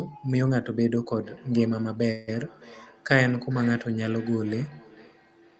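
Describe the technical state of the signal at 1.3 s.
At 1.3 s the signal carries a feedback echo between two devices, running from 1.16 s to the end of the clip. A second device in the room is replaying this call's audio, and the microphone picks it up again. Its echo canceller only removes what its own device plays, so the speech returns roughly every half second, each repeat thinner and more ringing. The loudest repeat reaches about 23 dB below the direct speech.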